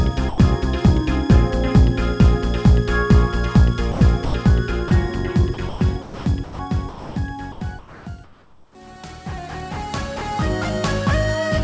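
At 0.29 s the sound is dropped by the voice detector for 90 ms, to 0.38 s. Steady, featureless noise takes its place before the sound returns. The likely cause is the sender's voice detector judging a quiet stretch to be background, halting transmission and leaving the receiver to insert comfort noise until the detector fired again.

From 3.92 to 4.34 s the sound is chopped by the voice detector. Sending likely switched off and on more than once here, and about 180 ms in total is replaced by comfort noise, so the sound breaks up.

A second drop by the voice detector follows at 4.88 to 4.91 s, a 30 ms gap filled with noise.

A longer chopped stretch runs from 5.54 to 6.59 s. Roughly half of it, 540 ms, is comfort noise, which gives a stuttering, gated quality.

Between 6.89 and 7.16 s the sound is dropped again. Noise fills 270 ms, and 180 ms of actual sound is missing.

From 7.52 to 8.75 s there is comfort noise in place of the background. 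For 870 ms the natural background gives way to a flat, detail-free synthetic noise. That points to discontinuous transmission, with the receiver likely generating noise shaped only approximately like the room.

Throughout, the call path's coding leaves nothing above 8 kHz, which fits a wideband codec such as G.722.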